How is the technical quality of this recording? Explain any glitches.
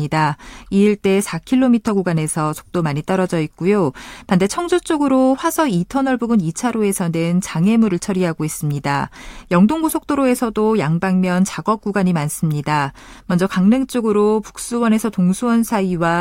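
No technical glitches can be heard anywhere in this speech recording. There is nothing to explain: no dropout, click or other disruption turns up at any point.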